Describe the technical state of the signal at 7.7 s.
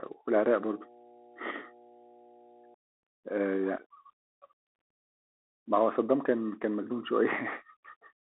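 At 7.7 s the signal is still passing through the Bluetooth CVSD headset codec, as it does for the whole clip. Each sample is reduced to a single up-or-down bit with an adapting step size, which fits a 64 kbit/s stream, and the speech is confined to a telephone band of roughly 300 Hz to 3.4 kHz, with nothing above 3.8 kHz. The result is thin, muffled speech with plainly audible granular hiss, scratchy sibilants and distortion on loud, bright sounds.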